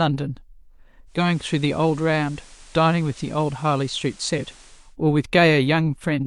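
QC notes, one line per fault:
1.06–4.97 s, digital radio blending to analogue: the receiver loses the digital stream and cross-fades over about 322 ms to the FM broadcast of the same station, then fades back at the end. During the FM stretch, hiss rises to roughly 25 dB below the speech, and the level drops by about 2 dB. The result is a noisier, slightly quieter section of speech.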